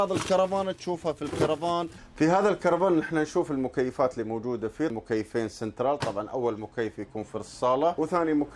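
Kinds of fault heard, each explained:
Nothing wrong turns up here; there's no technical fault to point to anywhere in the audio.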